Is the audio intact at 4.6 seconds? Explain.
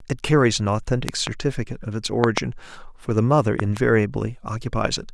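Yes, the audio at 4.6 seconds is intact, with no audible fault at that moment.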